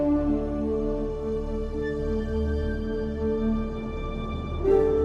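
No technical faults are audible anywhere in this audio.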